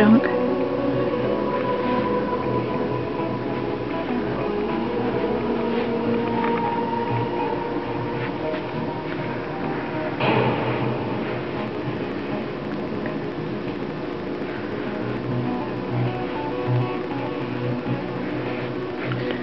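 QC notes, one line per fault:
11.60–19.35 s: train of clicks, evenly spaced ticks at 13.4 per second, around a hundred, peaking near the sound's own level; likely interference or a faulty connection.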